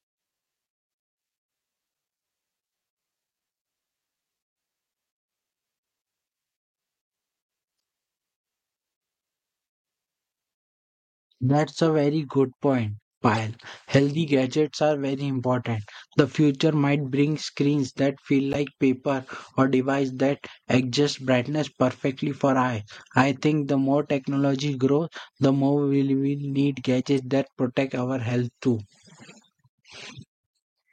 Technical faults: corrupt frame decoded

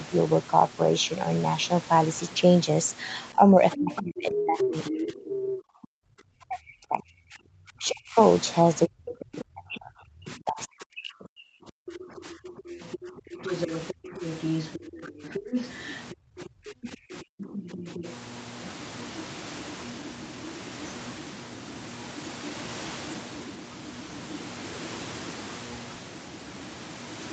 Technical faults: speech suppressed in double talk; other side's voice leaking through

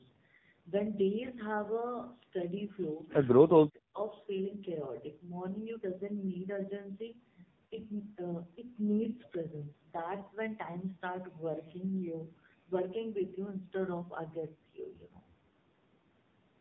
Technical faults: AMR narrowband mobile codec; lost AMR speech frames

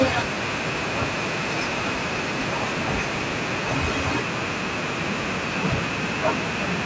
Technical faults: none

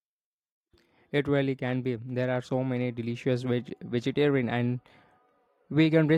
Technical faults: none

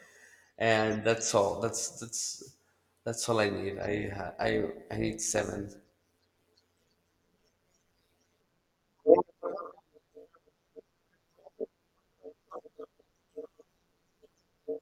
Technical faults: overlap-add ripple

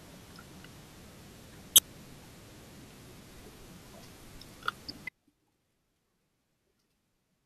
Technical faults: audio dropout to a faint residue

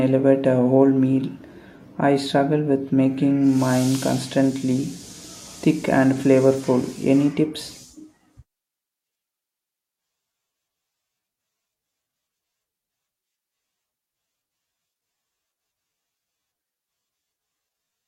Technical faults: AAC frame loss with concealment

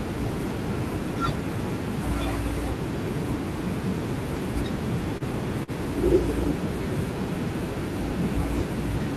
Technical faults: short stall from a late packet

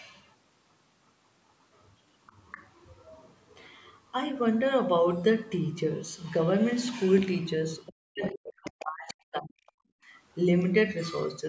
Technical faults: other side's voice leaking through; speech suppressed in double talk; background gated by the echo canceller

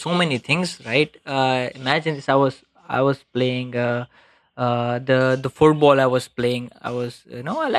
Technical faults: de-emphasis applied wrongly

